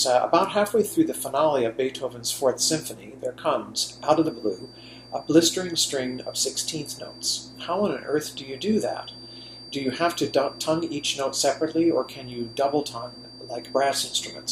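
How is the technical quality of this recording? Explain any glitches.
There's one real problem: a feedback whistle comes in at 3.74 s and stays to the end. It's a thin, steady tone near 4.7 kHz, sitting roughly 20 dB under the main sound and swelling and fading slowly. Most likely the speaker-to-mic loop is hovering right at the edge of feedback, ringing without ever running away.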